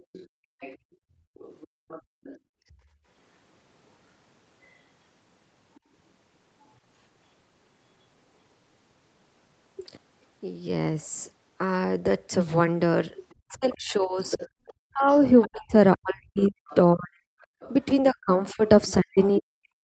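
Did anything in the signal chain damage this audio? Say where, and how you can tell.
Yes, all of it at the call-processing stage, in the echo canceller.

The other side's voice is leaking through at 0.0–2.39, 13.3–15.47, 16.38–17.73 and 18.67–19.42 s, roughly 25 dB below the speech in the first and third spans and about 15 dB below in the others. It is most likely incomplete echo cancellation. It is a second voice, not crosstalk hum or reverb.

Background is gated by the echo canceller between 0.03 and 0.93 s. The room sound drops by about 36 dB for around 0.4 s in total, then returns. It is a hard, level-triggered duck of the floor, unlike a codec's smooth comfort noise or a noise gate keyed to the talker.

Speech is likely suppressed in double talk from 13.32 s to the end of the clip. The talker dips by around 40 dB while the leaked voice overlaps it. The suppression follows the far-end activity, not packet timing, which separates it from network dropouts through the 32 kbps Opus path.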